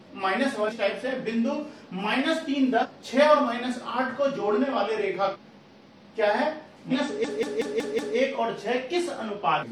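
At 0.65, 2.79, 5.30 and 6.88 s come brief blips of about 55 to 70 ms each, marking damaged data in a compressed stream. The decoder misreads corrupted frames, loses sync and hunts for the next valid header. A spectrogram shows narrow vertical smears of broadband junk and a waveform shows a small discontinuity. From 7.25 to 8.17 s a system hang loop replays one 186 ms slice five times, which fits an 8192-sample buffer. It is heard as a stutter at about 5.4 Hz as the hardware kept cycling its ring buffer. The waveform shows identical repeated blocks and the spectrogram shows repeating vertical stripes, with essentially no audio skipped. A final corruption blip follows at 9.57 s.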